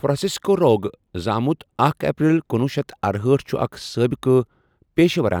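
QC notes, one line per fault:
Nothing to log for this speech recording. The listen turned up no event that needs a time or an entry.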